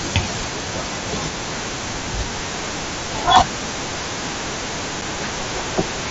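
At 5.01 s there is unconcealed Bluetooth headset packet loss. A gap of about 7.5 ms opens in the speech, which fits a single voice packet lost between headset and phone. Nothing fills it. The sound stops and restarts with abrupt edges, heard over the light grain of the mSBC link.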